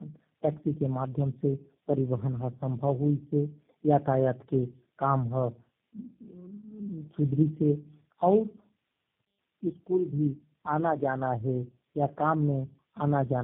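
Across the whole clip the speech sounds rough, muffled and warbly, with nothing above 3.5 kHz. That is tandem speech coding: the audio passed through three low-rate speech codecs in a row, AMR-NB, GSM full rate and finally G.729A, each re-encoding the previous codec's degraded output.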